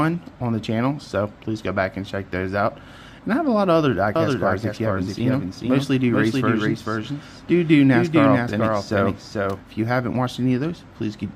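From 4.16 s to 9.60 s the audio has a doubled audio track: a full-band copy trails the original by roughly 0.4 s, around 5 dB quieter, with no decay, and starts and stops abruptly. On a spectrogram every event repeats as a fainter, time-shifted duplicate. It likely comes from a second, slower capture path mixed in.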